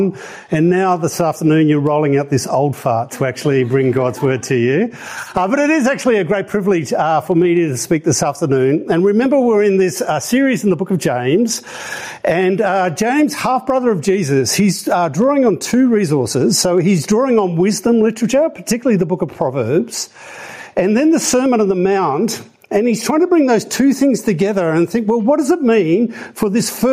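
From start to finish there's gain pumping: the level keeps getting yanked back down the moment anything loud comes along, a swing of somewhere around 15 dB. The likely cause is input gain set way too hot for the mic, with a fast limiter or compressor clamping each loud sound. Because of that, loud and quiet parts sit squashed together, and the whole thing feels flattened and restless.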